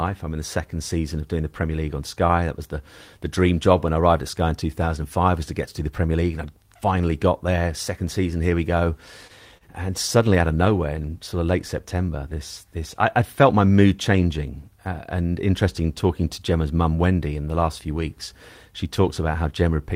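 At 9.27–9.33 s, just after "season here we go", and again at 9.58–9.64 s, short stalls from a late packet stretch the speech about 21 ms and 34 ms respectively while the jitter buffer sits empty. Each leaves a held sound with a slight buzz or dip before speech resumes.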